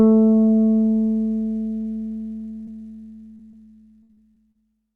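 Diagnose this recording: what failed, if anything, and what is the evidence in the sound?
The network path failed, with short concealed packet loss in three places: 2.65 to 2.69 s, 3.37 to 3.41 s and 3.51 to 3.55 s. Each is a brief smear or wobble in the sound. About 20 ms of audio never arrived in time at each point, which fits one lost 20 ms packet. The decoder at the receiver patched each hole by extending the preceding sound, then blended back into the real signal.

From 4.03 to 4.64 s the same fault turns into repeated packet loss (robotic sound). The stretch has four separate gaps, 160 ms of missing audio in total, and the longest gap is 62 ms. The concealment keeps stretching the last sound to cover each hole, and the next hole comes soon after. About a quarter of that span is synthetic. It sounds choppy, with pieces dropped out. This is network loss with receiver-side concealment.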